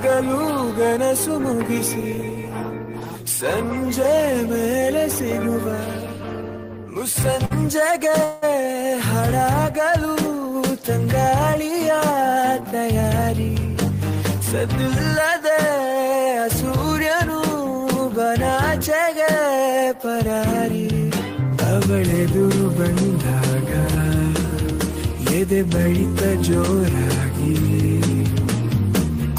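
The audio has a short stall from a late packet at 7.45 to 7.52 s: the last sound is held for about 50 ms with a slight buzz or dip, then resumes from the same point with nothing lost. Unlike a dropout, no content vanishes; the sound simply lingers a moment too long. A longer call audio freeze follows at 8.24 to 8.44 s, where the last sound is carried on as a fading buzz or hiss for about 176 ms without reaching silence, likely because the jitter buffer ran dry while packets were held up in transit. It is longer than the stall, and the sound decays instead of simply being held. Two jitter buffer speed-up passages, at 12.21 to 13.58 s (about 5 percent faster) and 14.34 to 15.54 s (about 4 percent), trim roughly 70 ms and 50 ms of stored audio in small pitch-period slices. The faster passage sounds slightly hurried, and both keep their pitch unchanged, which separates them from a simple playback-rate error.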